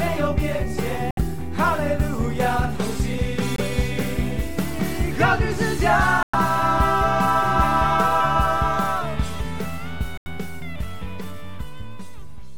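Abrupt holes of dead silence cut into the audio at 1.11 s, 3.54 s, 6.23 s and 10.18 s, lasting about 80, 56, 120 and 100 ms, with timing intact afterwards. These are corrupt frames muted: damaged compressed frames the decoder rejected, each gap spanning several frame lengths, replaced by silence.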